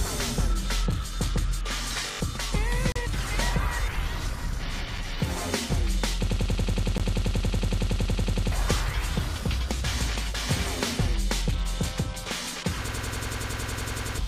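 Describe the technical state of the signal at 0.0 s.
At 0.0 s the signal is intact, with no dropout, distortion, glitch or other technical fault present at that moment.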